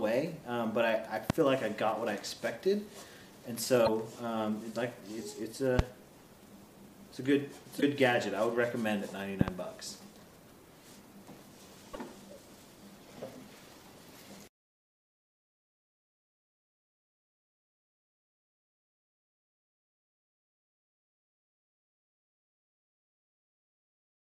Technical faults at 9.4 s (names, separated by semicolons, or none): loud pop